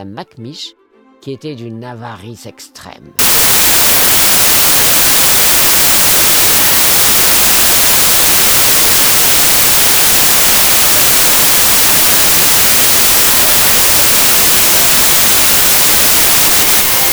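From 3.19 s to the end, the audio collapses into loud noise with the original sound buried inside it, running fast at about 1.33 times speed. This is a wrong sample width fault. It fits packed 24-bit samples being read as 32-bit ones.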